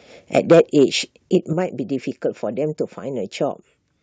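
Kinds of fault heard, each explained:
Microphone overload, 0.34 to 0.84 s: the speech peaks strike the converter's ceiling with roughly 6 dB of excess level, so their tops are sliced flat. Around one sample in twenty is flattened, giving the loudest syllables a harsh, crackly rasp rather than a clean rounded shape. The likely cause is the microphone's input volume being set too high for this talker, pushing peaks beyond what the converter can represent.
Microphone volume stepped down, at 0.52 s and 1.53 s: the whole signal, speech and background alike, drops abruptly in level, by about 3 dB the first time and about 6 dB the second. The first drop lands inside the distorted stretch. These single-step cuts most likely come from call software reacting to an overloading microphone by lowering the device's input gain, producing sudden dips rather than smooth fades.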